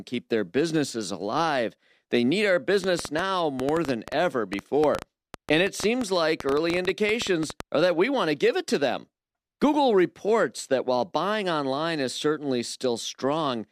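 From 2.84 to 7.61 s, a train of clicks runs over the speech. Some 40 similar pops arrive at an uneven pace, near 7.8 per second. They peak about 15 dB above the speech and tick through pauses too. Electrical interference or a faulty connection is the likely cause.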